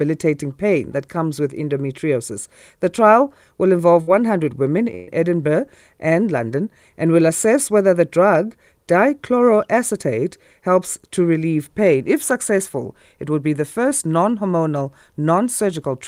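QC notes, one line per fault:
4.01–4.09 s and 4.95–5.09 s, burst of packet loss: just after "trial will", about 56 ms is filled in place of about 60 ms of lost speech; the second gap fills about 124 ms for about 120 ms lost. The receiver extends the last sound and fades it, so each gap carries a held, dimming tail rather than silence, and the speech then picks up further on with a piece skipped. That filled, fading stretch sets it apart from a plain dropout.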